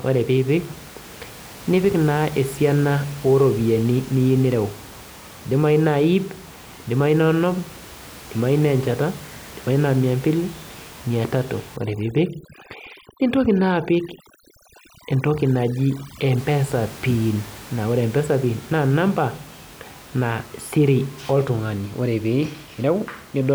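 From 11.77 to 16.38 s, just after "mia mbili mia tatu", overdone noise removal sets in: a denoiser pushed too hard shuts off frequency bands near its noise estimate, taking quiet speech detail with them. The background drops and breaks up into twinkling specks. That gated, sparkling emptiness tells it apart from a low-bitrate codec, and the room noise, about 21 dB under the speech, is heard before and after.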